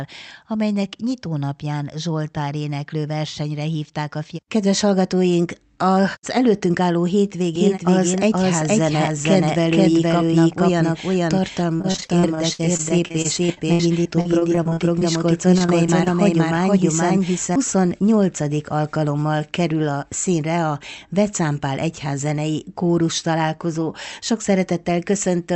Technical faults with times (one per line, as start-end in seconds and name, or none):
7.55-17.56 doubled audio track
11.73-15.03 repeated packet loss (robotic sound)
15.51-16.08 repeated packet loss (robotic sound)
17.75-18.09 jitter buffer speed-up